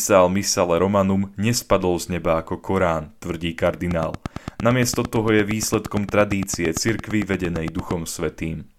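A train of clicks from 3.91 s to 7.92 s, likely interference from nearby equipment or a faulty connection, injects a regular pulse about 8.8 times a second. Some forty sharp, similar ticks, roughly 10 dB above the speech, sound through words and pauses alike.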